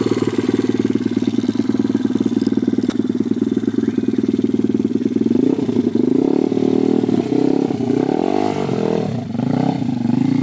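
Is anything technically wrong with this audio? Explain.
Yes, there's a brief dropout at 2.90 s. For about 20 ms the sound gives way to a patch of steady noise and then picks straight back up. That's likely the sound dropped by the voice detector: the sender's detector briefly judged the signal to be background and stopped sending, so the receiver filled the gap with comfort noise. The audio also carries nothing above 8 kHz, which fits a wideband call codec like G.722.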